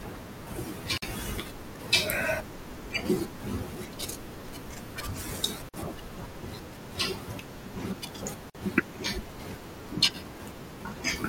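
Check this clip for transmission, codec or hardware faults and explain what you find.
Three gaps at a join of encoded pieces, at 0.98–1.02 s, 5.69–5.74 s and 8.50–8.55 s. The speech was encoded in separate pieces and joined without trimming, so each seam keeps the encoder's start delay and last-frame padding. The speech drops out for about 47–49 ms, with smeared edges, then resumes where it stopped.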